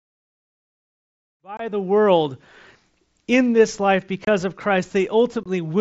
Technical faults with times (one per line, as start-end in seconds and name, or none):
1.57-1.60 unconcealed Bluetooth headset packet loss
4.25-4.27 unconcealed Bluetooth headset packet loss
5.43-5.46 unconcealed Bluetooth headset packet loss